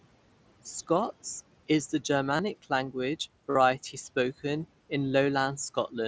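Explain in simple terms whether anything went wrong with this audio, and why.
Throughout the clip, a noise suppressor is at work, and it leaves noise suppressor artifacts. Frame by frame, it turns down the parts of the sound it judges to be steady background hiss. That makes the room noise drop away in the pauses and come back up under the speech. The speech itself can come across as a little thin or watery because of this.

In two places the clip has concealed Bluetooth headset packet loss. Small chunks of audio travelling from the headset to the phone went missing, and the phone filled each gap by repeating a closely matching slice of the sound just before it. The first gap, right after "is the", runs from 2.37 to 2.39 s. It is only about 22 ms long, which fits three lost packets. The second, from 3.51 to 3.55 s, is about 45 ms, which fits six lost packets. There the sound turns briefly buzzy and steady, with a small wobble as the real audio returns.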